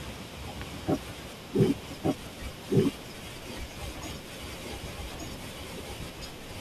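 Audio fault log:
throughout: doubled audio track. The speech is heard twice, a second full-band copy trailing about one second behind at roughly the same level. It carries no decay or room colour, so it sounds like an overlapping repeat. A likely cause is a second, slower capture path.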